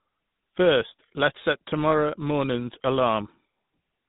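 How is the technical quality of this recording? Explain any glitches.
The technical quality is poor. Throughout, the speech has a buzzy, gravelly roughness and nothing above 4 kHz. That points to the GSM full-rate codec, whose pulse-driven vocal-tract model at a low rate, which fits 13 kbps, plainly coarsens the voice.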